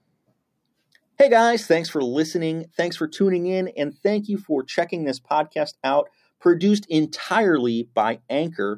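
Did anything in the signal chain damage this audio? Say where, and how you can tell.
No, nothing in the chain left a mark on this speech that I can hear, so there's no stage to point to.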